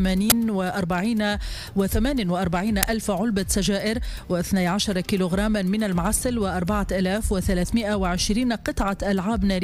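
At 0.30 s there is a sudden, very loud burst of harsh digital noise, about 20 ms long. A second, shorter burst of about 5 ms hits at 2.83 s. Both are uninitialised buffer faults. The playback path sent out a block before any audio had been written into it. Whatever data was left in that memory was played as if it were samples. The result is a brief blast of noise unrelated to the surrounding sound.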